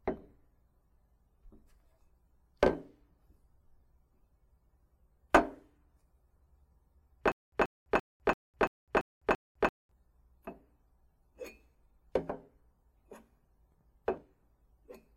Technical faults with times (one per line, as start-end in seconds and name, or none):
7.32-9.91 stutter with silent gaps